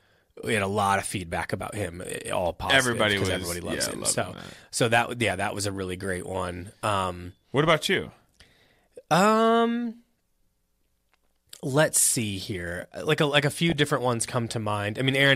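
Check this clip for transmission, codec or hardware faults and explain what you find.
One fault is present: a short burst of DAB burbling from 13.70 to 13.74 s, near the end of the speech. With weak reception, a few bit errors per thousand slip past the error correction into the MP2 data. Corrupted samples then add short noise blips in individual sub-bands, and corrupted scale factors make sub-bands jump in level. The result is a few brief watery blips laid over the speech, lasting about two audio frames. On a spectrogram it appears as isolated bright rectangular blocks in narrow bands.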